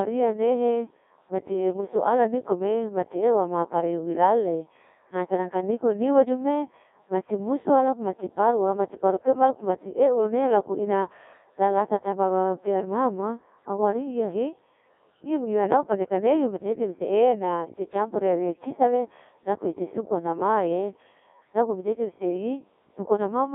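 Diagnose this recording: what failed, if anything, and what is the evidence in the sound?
The failure is at the codec stage: the speech went through a Codec 2 vocoder, which transmits only pitch, voicing, energy and a coarse spectral envelope, then rebuilds the voice from sine waves. Throughout the recording the original waveform is gone, so the speech sounds robotic and buzzy, with heavy codec damage. The band sits roughly between 250 Hz and 3.6 kHz, and the degree of damage fits the 1.6 kbit/s mode.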